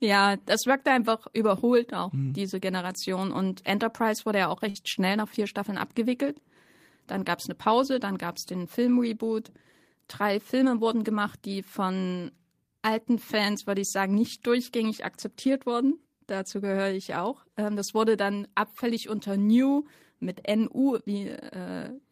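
At 4.69 s, just after "wurde ja auch", the speech turns into a brief held buzz or hiss that fades rather than stops, and at 4.78 s it resumes on "schnell nach vier" with a small piece absent. This is a burst of packet loss: several packets in a row never arrived in time, so the receiver stretched the last sound for about 55 ms while lowering it, then skipped ahead, dropping roughly 60 ms of speech.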